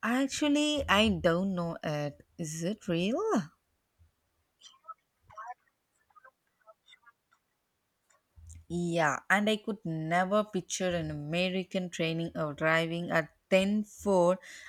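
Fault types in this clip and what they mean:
No faults can be heard anywhere in the recording.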